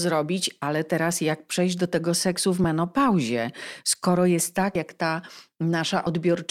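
At 0.62 s, just before "teraz jak przejść do", and again at 6.06 s, compressed frames are skipped: about one frame of the encoded stream, which points to a 32 ms frame length, never reached the output, either lost from the file or rejected by the decoder. The speech jumps forward by roughly 30 ms each time.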